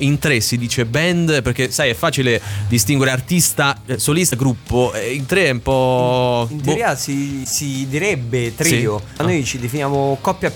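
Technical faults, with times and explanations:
4.30–4.33 s and 7.43–7.46 s, broken MP3 bit reservoir: each time the audio skips forward with a brief glitch lasting about 30 ms, roughly the length of one 26 ms MP3 frame. The likely cause is missing frames. The frame after each cut still expects its borrowed bits in the earlier frames, finds another frame's bytes there instead, and decodes briefly as garbage before the stream settles.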